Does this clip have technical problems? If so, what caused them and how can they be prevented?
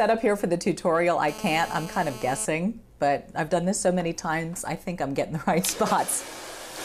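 Yes. From 1.28 to 2.46 s there's a GSM phone buzz, a hard, raspy drone at about 217 Hz with a dense stack of harmonics, sitting about 15 dB below the audio and holding steady, as you'd expect from a phone on a call. A 2G handset was transmitting in bursts 217 times a second, and the audio circuitry rectified those radio pulses into sound. To prevent it, keep phones switched off or in flight mode and well away from mics, cables and interfaces while recording.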